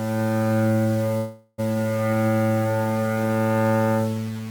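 A short clip of everyday sounds with a coarse, grainy edge the whole way through. It's low bit depth without dither: the audio is likely sitting on only about 5 bits, rounded to the nearest step with no dither to smear the error, so the distortion rides along with the sound itself. The grit sits only about 20 dB under the signal, and quieter moments get rougher instead of fading cleanly. Then from 1.17 to 1.6 s there's a call audio freeze. The last bit of sound gets stretched into a fading hold for roughly 0.41 s, never quite dropping to silence. That's the likely signature of a jitter buffer running dry while packets were held up. When they arrive, the audio carries on from where it stopped, so nothing is actually lost. Everything after that point just runs about 0.41 s later than it should.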